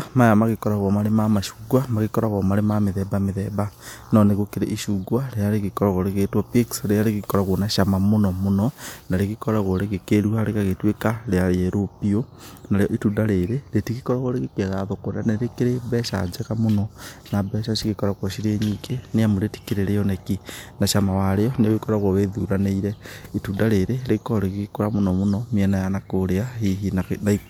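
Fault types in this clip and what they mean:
No fault types can be heard in this clip.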